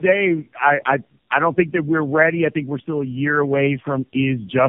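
Throughout, tandem speech coding: three stacked coding passes compound each other, leaving the speech rougher and more warbly than any single codec would, with nothing above 3.5 kHz.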